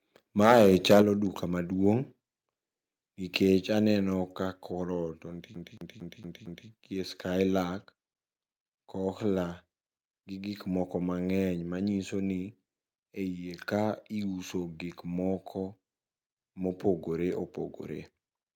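Microphone overload runs from 0.41 to 1.02 s. The loudest syllables of the speech drive the input about 11 dB past what the converter can represent, so their peaks are sheared flat, with roughly one sample in twenty pinned at the ceiling. The result is a harsh, crackling edge on each strong syllable. The likely cause is the microphone input volume being set too high for this talker.

Microphone volume stepped down follows in two abrupt moves: a drop of about 6 dB at 1.02 s, right as the overloaded stretch ends, then a further drop of about 2 dB at 2.04 s. Voice and background fall together at each step, with no gradual fade. This is the likely sign of call software reacting to the clipping by cutting the device's input gain.

CD stuck on one turn appears from 5.55 to 6.69 s, immediately after "ka korot". A 228 ms slice of the speech plays five times over, with a brief mute at every jump back, giving the quick, evenly spaced stutter of a skipping disc. 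A scratch sends the laser back to the same point on each revolution, so the identical fragment repeats until playback breaks free.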